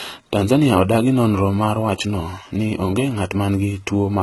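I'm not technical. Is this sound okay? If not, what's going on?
No. HE-AAC compression damage runs through the whole clip. The treble sounds bright but artificial, and the s sounds come out gritty and lispy. That is likely from squeezing the file very hard: the lower frequencies are kept and the treble is rebuilt by copying them upward.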